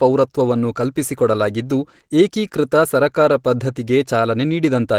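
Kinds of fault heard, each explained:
Opus compression: Throughout the speech there is plainly audible coding damage, a muffled and hoarse quality, yet the content still reaches up to about 20.3 kHz, so the bandwidth has not been narrowed. The likely cause is low-rate Opus encoding in which the encoder has left its music mode for its hybrid speech mode, modelling the speech instead of preserving every band's detail. The sound fits a rate around 16 kbps.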